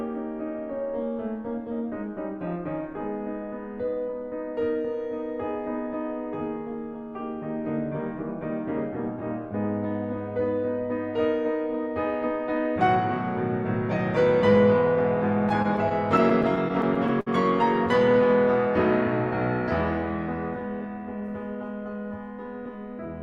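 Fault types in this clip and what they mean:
Repeated stalls (stutter), 15.49 to 17.28 s: late packets emptied the jitter buffer thirteen times, each gap filled by holding the last sound, longest 59 ms, so the music drags.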